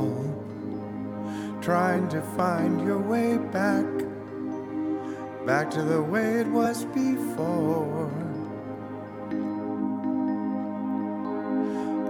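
At 0.72 s, 1.95 s and 6.64 to 6.66 s, compressed frames are skipped: about two 23.2 ms frames never decode, so the audio jumps ahead roughly 50 ms.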